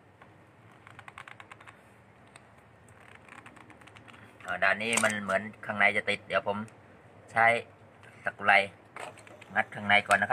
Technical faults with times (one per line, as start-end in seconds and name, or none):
9.07-10.33 timecode bleed